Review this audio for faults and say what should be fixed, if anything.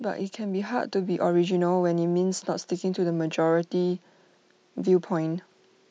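Automatic gain rising runs from 0.36 to 1.33 s. The gain control judged the input too quiet and raised it by about 4 dB, so speech and background noise swell together. The waveform envelope ramps upward, and the spectrogram brightens evenly at all frequencies, including the noise floor. Setting a proper input level and disabling automatic gain control would prevent it.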